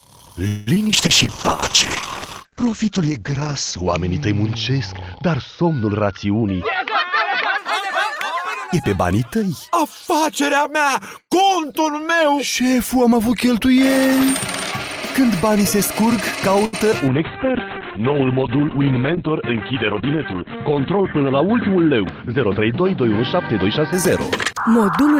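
From 0.47 to 0.91 s there is repeated packet loss, heard as robotic sound. Three gaps hit in quick succession. The longest lasts 193 ms. Each one is patched by extending the last sound, so about half of that stretch is concealment, 214 ms in all. Another 60 ms of real audio is simply gone. The result is choppy, with pieces missing.

At 0.92 s a call bitrate drop begins and lasts until 7.64 s. The encoder falls from 32 kbps to 8 kbps and stays at its lowest for about 3 s. At that rate the audio band narrows from 20 kHz to 8 kHz. The sound turns coarse and watery, and the top end is dull.

Inside that stretch, from 2.45 to 2.71 s, comes a jitter buffer slow-down. The receiver is refilling its reserve, so it repeats tiny slices of the signal. That adds 41 ms and runs the audio at 87% speed. The pitch stays the same. The sound just drags, drawn out for a quarter of a second.

From 6.41 to 10.62 s there is a jitter buffer speed-up. 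The buffer holds more than it needs, so the receiver trims short pieces again and again. About a fifth of a second is removed. The audio plays at 105% speed, with the pitch unchanged. It sounds slightly hurried.

At 16.65 s there is a short stall from a late packet, lasting until 16.75 s. The buffer runs dry, and the last sound is held for 76 ms until the packet arrives. Nothing is lost, but delay grows by 76 ms. It is heard as a brief held sound with a slight buzz or dip.

From 16.91 to 16.94 s there is a short concealed packet loss. Only 9 ms is filled before the real audio resumes, and 20 ms is missing. It comes across as a tiny smear or wobble.

A second call bitrate drop runs from 17.09 to 24.73 s. This one is deeper. It goes from 32 kbps down to 7 kbps and holds there for about 3.6 s. The bandwidth shrinks from 20 kHz to 4 kHz. The sound becomes muffled and rough, like a narrow phone line.

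Within it, from 19.92 to 20.96 s, comes another jitter buffer speed-up. It runs at 107% speed and removes about 70 ms. The pitch holds, and the passage briefly sounds rushed.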